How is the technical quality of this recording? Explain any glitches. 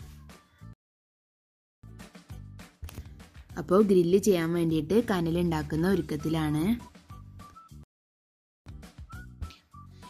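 Two rebuffering stalls interrupt the audio. The first runs from 0.73 to 1.84 s, adding 1.1 s. The second runs from 7.83 to 8.66 s, adding 0.83 s. Each time, playback used up its downloaded audio and waited for more. The sound drops to silence, then continues exactly where it stopped. Nothing is lost, but the pauses lengthen the recording.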